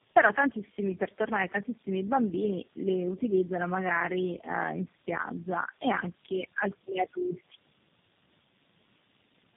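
From start to finish the speech sounds rough, muffled and warbly, with nothing above 3.4 kHz. This is tandem speech coding. The call seems to have been squeezed through several low-rate speech codecs in turn, which fits about four separate coding passes ending in something like G.729A. Each encoder had to model audio the previous one had already distorted, so the errors stack up into a duller, more smeared sound than any single link would give.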